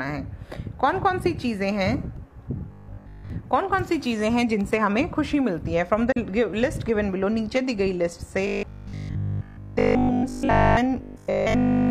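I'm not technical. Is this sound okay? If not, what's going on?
No. From 2.68 to 3.3 s, from 8.47 to 10.77 s, and again from 11.02 s to the end, the sound turns into a stiff, metallic buzz humming at 50 Hz. This is robotic sound from repeated short buffers: audio likely arrived too slowly, so the player kept repeating tiny 20 ms pieces instead of playing new sound. In the first stretch most of the sound is replaced this way, and in the later two all of it is.

From 6.12 to 6.17 s there is a brief, soft-edged gap of about 43 ms where the sound fades out and back in. This is AAC frame loss with muting, which fits a single lost frame that the decoder filled with silence.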